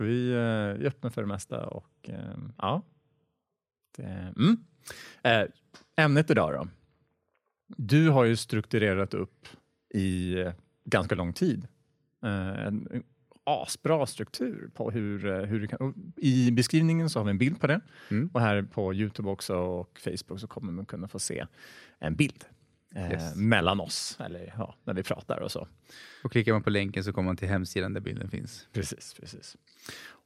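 At 14.37 s the speech briefly runs 5.7% fast and rises nearly a semitone, 97 cents. At 14.99 s it snaps back, just before "hur kan I beskrivningen". At 28.00 s, after "man till hemsidan där", the opposite happens. The speech slows by 5.7% and drops about 102 cents until 28.59 s. Both are a drift correction step, likely from clock-matching software jumping its playback rate to refill or drain a buffer.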